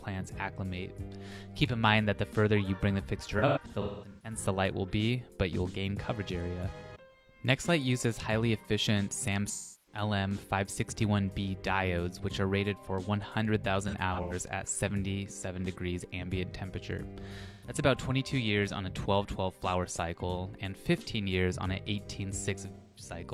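AAC frame loss with concealment occurs at 3.38–4.38 s, 9.50–10.02 s, 13.87–14.33 s, 17.46–17.74 s and 22.76–23.11 s. The decoder rebuilds the missing frames from the last good spectrum, which leaves smeared, noisy patches. The first event's scattered gaps include a run of about a fifth of a second.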